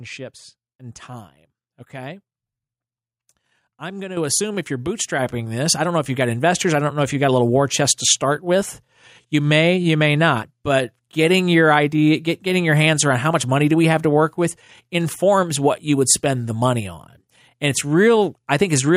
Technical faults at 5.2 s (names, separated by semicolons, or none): microphone volume stepped up